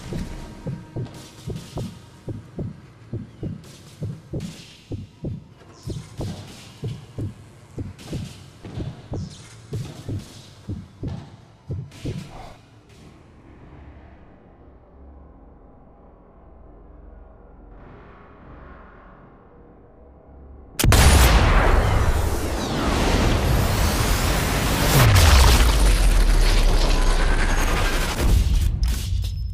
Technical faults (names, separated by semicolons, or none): none